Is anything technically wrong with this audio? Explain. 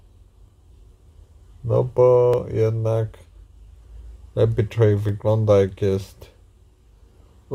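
Yes. From 0.50 s to 6.93 s there is a regular click about every 0.92 s, roughly seven in all. This pattern points to clock drift buffer slips. Two devices likely run on independent clocks that disagree by several hundred ppm, so the buffer between them drifts until a block of a few tens of samples is dropped or repeated. Each slip leaves a step in the waveform, which shows on a spectrogram as a thin, evenly spaced broadband vertical line.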